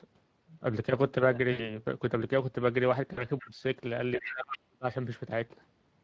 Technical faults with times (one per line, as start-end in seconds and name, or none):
0.00-6.03 Speex codec
1.51-1.75 VoIP packet loss concealed by the speech codec
3.13-3.25 VoIP packet loss concealed by the speech codec
3.39-3.44 other side's voice leaking through
3.41-3.62 speech suppressed in double talk
4.16-4.86 speech suppressed in double talk
4.19-4.32 other side's voice leaking through